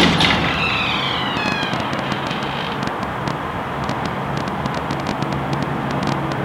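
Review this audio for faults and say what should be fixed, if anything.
A train of clicks runs from 1.37 to 6.33 s, around fifty sharp, similar pulses at about 8.9 per second with irregular spacing, peaking roughly 20 dB above the sound. It is likely interference or a faulty connection or power supply. They appear as thin full-band vertical lines on a spectrogram and narrow spikes on the waveform. To prevent it, shield and reroute cables away from nearby equipment and check the interface's connection and load.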